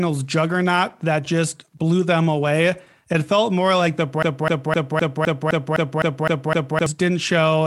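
A short speech recording that, right after "felt more like the", sticks in a broken-record loop from 4.23 s to 6.86 s: a 0.26 s fragment repeats exactly, back to back, ten times. The stream likely stalled and replayed its last buffered piece, losing the intended audio.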